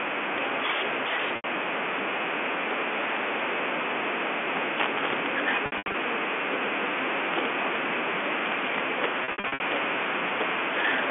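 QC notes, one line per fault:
Throughout: integer overflow. Loud peaks are driven about 19 dB past full scale, and around one percent of samples exceed the limit. Instead of being clamped, each of those samples wraps to the opposite extreme, so the waveform jumps across the whole range in a single step. The result is harsh, violent cracks on the strongest speech peaks, far sharper than ordinary clipping, riding over the band-limited telephone sound of the G.711 line.
1.36–1.44 s, 5.66–5.94 s, 9.24–9.60 s: packet loss with pitch repetition. The first event is one 80 ms gap. The second loses 180 ms scattered over 280 ms, with the longest run 80 ms. The third loses 240 ms spread across 360 ms, with runs up to 60 ms. The receiver fills each gap by repeating the last pitch period and fading it out, giving brief held, buzzy tones that thin out before speech cross-fades back.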